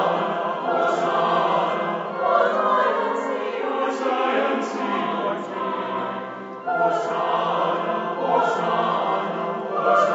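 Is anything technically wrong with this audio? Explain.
No, nothing in this audio sounds technically wrong.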